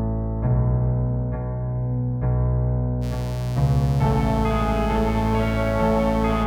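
From 3.0 s to the end of the music, a mains buzz appears: a steady, raspy tone built on 60 Hz, with switching spikes twice per cycle spreading harmonics into the kilohertz range. It sits well below the music, roughly 20 dB down, pointing to interference entering through a dimmer, rectifier or poor shielding.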